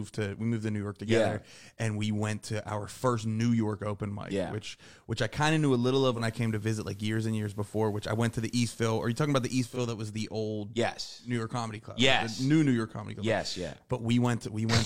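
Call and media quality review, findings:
Digital radio blending to analogue, 6.10–9.80 s, after "of knew a little" until "that was the old". Receiver lost digital, 177 ms cross-fade to FM and back. Hiss rises, roughly 35 dB down, level shifts about 3 dB.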